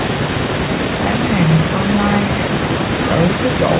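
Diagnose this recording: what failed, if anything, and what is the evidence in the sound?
Nothing failed; no stage shows any fault.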